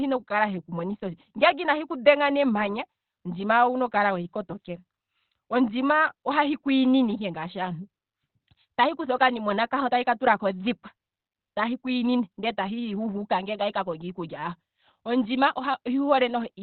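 Speech, muffled and hoarse for the whole clip, with nothing above about 4.3 kHz. This is likely Opus compression in its narrowband speech mode, which fits a rate near 12 kbps. The hoarse quality sets it apart from a simple low-pass filter.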